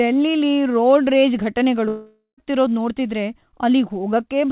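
A long network dropout runs from 1.88 to 2.39 s, right after "ರೋಡ್ ರೇಜ್". About half a second of speech is lost. The receiver stretches the last sound it had into a buzzy, hissing tail that fades out, leaving a short silent gap of about 120 ms before speech resumes further on, with the missing stretch skipped. The cause is likely packets failing to arrive. The band stops at 4 kHz throughout, which fits a G.711 mu-law call path.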